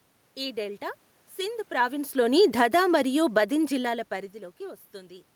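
Speech that turns quieter from 1.71 s, just after "ఈ డెల్టా సింధ్", sinking by about 6 dB until 4.01 s, with the room noise dropping along with it. That shared fall marks automatic gain falling, the gain control easing back on an input it judged too loud or too noisy.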